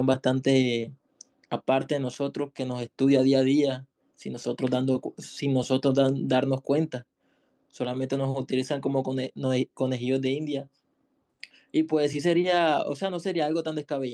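No technical faults can be heard anywhere in the audio.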